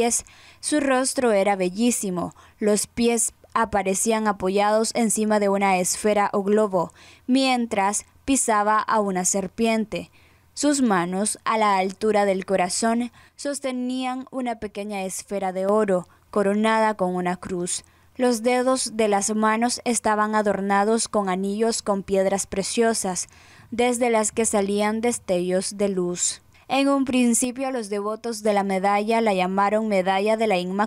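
At 13.29 s the level suddenly sags by about 6 dB and stays down until 15.69 s, then snaps straight back. The same drop happens again from 27.45 to 28.45 s. That's most likely one channel dropping out: with only one side feeding the mono sum, anything shared between the channels halves, so each gap sounds quieter but otherwise unchanged.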